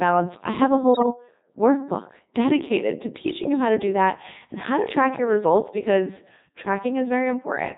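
Throughout, the speech carries the robotic, buzzy character of the Codec 2 vocoder. The decoder rebuilds the voice from sine waves using only pitch, voicing, energy and envelope. On a spectrogram, harmonics look unnaturally regular and smeared. The damage is heavy, even in its 3.2 kbit/s mode.

From 0.94 to 1.06 s, between "I have a" and "workbook dedicated to", bit errors on digital voice radio corrupt the vocoder's parameters, at a rate of several percent. Pitch, level and tone lurch into warbling bleeps. This shows as jagged harmonic jumps, which fits roughly five damaged frames.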